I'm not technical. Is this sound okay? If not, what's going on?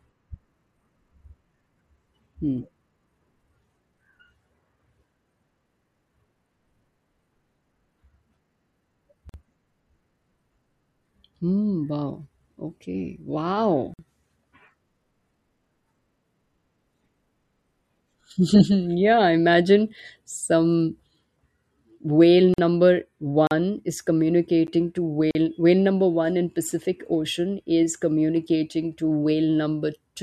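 No. The speech has brief dropouts. At 9.29, 13.94 (right after "hmm wow okay wow"), 22.54 and 25.31 s (just before "whale number"), it goes quiet for about 40 to 50 milliseconds, with softened edges, then picks up where it left off. Each is a gap at a join of encoded pieces: the recording was compressed in separate sections and stitched together, and the bit of silence each section carries at its ends was never trimmed away.

Two more dropouts sound sharper. At 23.47 s the sound cuts out for 40 milliseconds, a short hole, and at 24.67 s a 10-millisecond cut comes across as a tick. These are blocks of digital silence: a stretch of the audio was replaced by silence, so it stops and restarts with no fade, and that sudden jump makes the tick.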